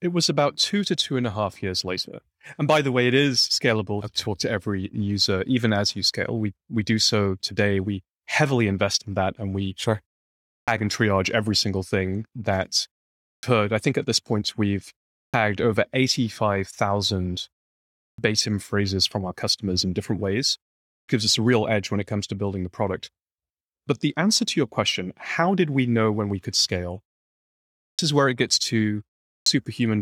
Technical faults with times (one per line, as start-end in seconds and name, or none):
10.55-10.68 clipped start after a pause
13.30-13.43 clipped start after a pause
15.22-15.34 clipped start after a pause
18.05-18.18 clipped start after a pause
20.96-21.08 clipped start after a pause
27.85-27.99 clipped start after a pause
29.33-29.46 clipped start after a pause